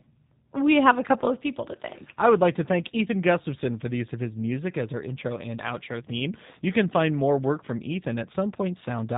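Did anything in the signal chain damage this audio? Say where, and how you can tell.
Yes, at the codec stage, across the whole clip: G.729 coding. The speech has nothing above 3.8 kHz and a plainly rough, synthetic texture, which fits an 8 kbit/s G.729A model-based coder. A simple low-pass filter would only dull the sound; the roughness points to coarse pulse excitation.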